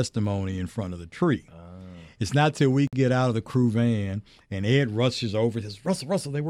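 A gap at a join of encoded pieces opens at 2.87 to 2.93 s in this speech clip, a gap of about 54 ms between "not till we" and "get out of the", with edges smeared by the codec so the silent part is shorter. The audio was encoded in separate pieces of about 4 s and joined without trimming, so the encoder's start-up delay and last-frame padding both remain as silence before the speech resumes where it stopped.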